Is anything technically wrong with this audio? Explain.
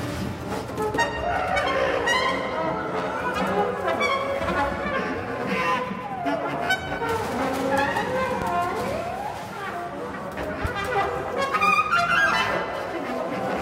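Yes, there are two loud pops. The first runs from 8.42 to 8.45 s and stands out clearly, roughly 15 dB above the surrounding level. The second, from 10.65 to 10.68 s, is a bit softer at about 10 dB over. Each is a single sharp thump, and the audio carries straight on underneath. They're likely voltage transients, a switch click, static discharge or a driver glitch, pushed into the signal path and shaped by the circuitry downstream.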